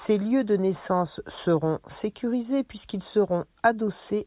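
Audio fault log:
No technical fault can be heard anywhere in the speech recording.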